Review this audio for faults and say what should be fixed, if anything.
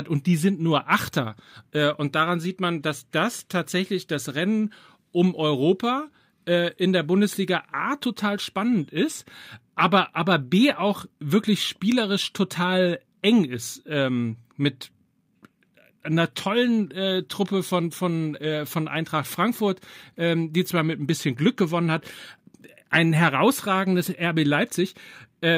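Nothing here needs fixing; no faults are audible.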